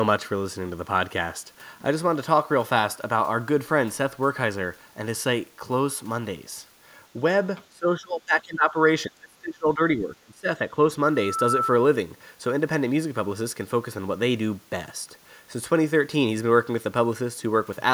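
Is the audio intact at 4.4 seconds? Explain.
Yes, at 4.4 seconds the speech plays through cleanly, with no audible fault at that point.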